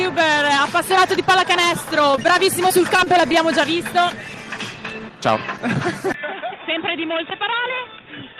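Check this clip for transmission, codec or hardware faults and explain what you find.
Four faults are present: two brief network glitches close together just after 2 s, a longer stretch of repeated loss shortly after, and a change in input quality for the last two seconds.

From 2.11 to 2.16 s there is a short stall from a late packet. The jitter buffer ran dry, so the receiver held the last sound for about 22 ms until the packet arrived. Nothing is lost, but the sound lingers slightly too long and shifts later by about 22 ms.

Right after, from 2.16 to 2.19 s, a short concealed packet loss follows. About 20 ms of audio never arrived, and the decoder bridged it with roughly 14 ms of extrapolated sound before blending back. It comes across as a brief smear or wobble.

Between 2.68 and 3.35 s, repeated packet loss produces a robotic sound. Five separate gaps, the longest 19 ms, were each patched by extending the preceding audio, covering about 10% of that span. 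The result is choppy, with small pieces dropped out.

From 6.12 s to the end, the input switched to a poorer device, likely another microphone or a headset's call profile. A silence of about 20 ms marks the switch. Afterward nothing remains above 3.8 kHz, so the sound turns dull and boxy, and the level drops by roughly 10 dB.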